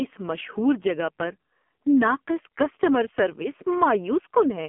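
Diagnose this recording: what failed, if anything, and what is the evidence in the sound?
The codec stage is at fault: the AMR narrowband mobile codec runs throughout. Nothing gets above about 3.7 kHz, the band sits near 200 Hz to 3.4 kHz, and the speech sounds heavily buzzy and synthetic, which fits a low mode around 5.9 kbps.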